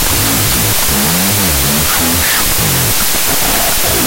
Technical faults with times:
0.00-4.07 wrong sample width

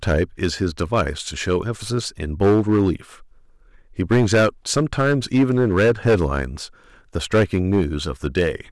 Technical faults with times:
0.00-8.72 hard clipping

